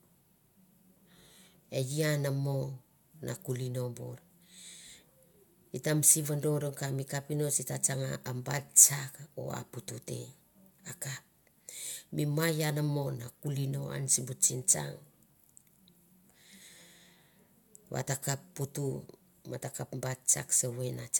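Nothing in this speech recording stands out as a technical problem; it just runs along without a hitch from beginning to end.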